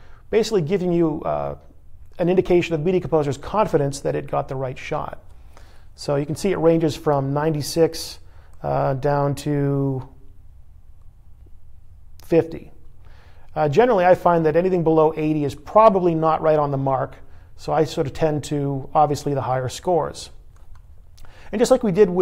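No dropouts, distortion, timing errors or level problems turn up anywhere in the recording.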